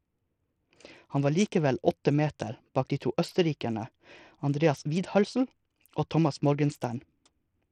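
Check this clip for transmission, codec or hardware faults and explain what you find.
The clip has one codec fault. Throughout, the treble flickers and drops away while a gritty, aliased noise rides on the speech, plainly audible; this is likely Bluetooth SBC compression, which fits a starved bit pool around 80 kbps leaving the top sub-bands with too few bits.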